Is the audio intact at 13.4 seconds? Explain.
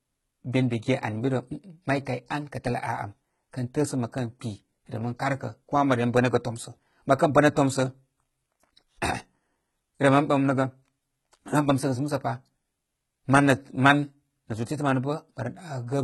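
No. At 13.4 seconds, as throughout the speech, the treble is rebuilt by spectral band replication, likely HE-AAC compression at heavy damage, which fits a bitrate around 16 kbps. Sibilants sound gritty and metallic, and a spectrogram shows copied, smeared high bands ending abruptly at 11.9 kHz.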